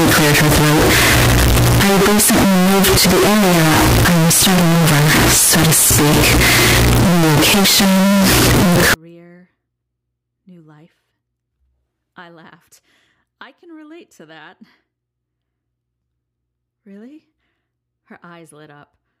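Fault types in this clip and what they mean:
Signed and unsigned mixed up: from 0 to 8.94 s the speech becomes very loud, harsh noise with quiet gaps as loud as speech, likely from misread 16-bit sign bits, unlike clipping.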